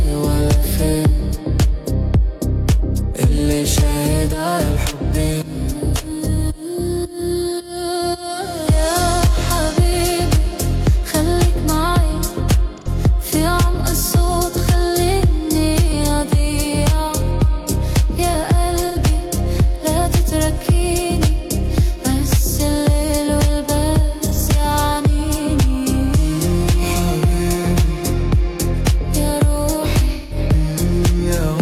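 At 12.78, 18.87, 24.33 and 30.13 s, AAC frame loss with concealment patches gaps of about 85, 85, 43 and 171 ms, in whole 43 ms frames, from the last good spectrum. This yields smeared, noisy patches rather than the clean silence of a plain dropout.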